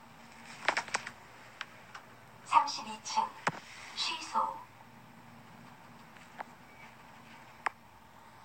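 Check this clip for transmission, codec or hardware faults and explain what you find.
No transmission, codec or hardware faults.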